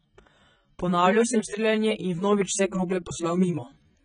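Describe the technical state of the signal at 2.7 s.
At 2.7 s the speech carries heavy damage consistent with AAC compression, present through the whole clip rather than at that moment alone. The sound is dull and smeared, with a warbling, fizzy edge on sibilants, likely from AAC-LC quantising its frequency lines so coarsely that it fits a bitrate around 16 kbps. On a spectrogram, energy stops flat at 9.6 kHz, with patchy holes and blotchy noise-filled bands below.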